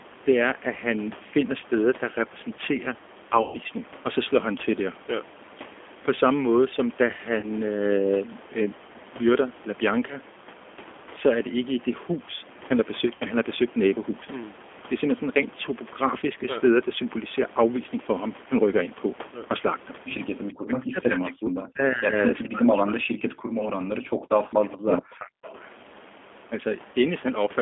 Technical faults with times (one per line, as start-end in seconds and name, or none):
0.00-27.61 G.729 codec
3.42-3.59 VoIP packet loss concealed by the speech codec
7.40-7.48 VoIP packet loss concealed by the speech codec
13.15-13.25 VoIP packet loss concealed by the speech codec
20.55-22.12 speech suppressed in double talk
22.44-25.56 speech suppressed in double talk
24.72-24.76 echo leak
25.43-25.69 echo leak